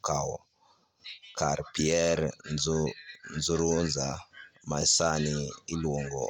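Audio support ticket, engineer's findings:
Engineer's findings: no audio fault found in this speech recording.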